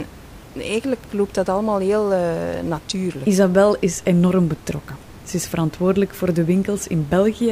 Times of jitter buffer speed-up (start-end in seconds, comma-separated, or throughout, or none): none